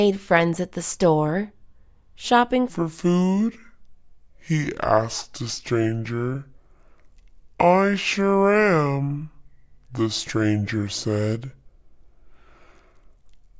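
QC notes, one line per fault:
2.70–13.59 s, wrong sample rate: from 2.70 s to the end the sound drops to about two-thirds speed and sinks roughly 7 semitones, so everything drags low and heavy, with pitch and tempo falling together. That locked pairing shows the samples are being clocked out slower than they were captured, with no conversion between rates. A ratio of 0.667 fits material recorded at 24 kHz but played back at 16 kHz.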